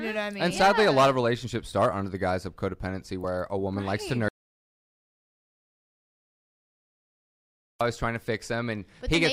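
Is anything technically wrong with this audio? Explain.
Yes, there are two faults.

Compressed frames skipped at 3.23 s. About one 26.1 ms frame, roughly 30 ms of audio, never reached playback because it was missing or rejected as damaged. The sound jumps ahead slightly.

Audio dropout to silence from 4.28 to 7.81 s. The sound cuts off abruptly and about 3.5 s of silence follows, with no room tone, before it resumes mid-flow. The input was likely lost while the recording kept writing silence, so that stretch is gone.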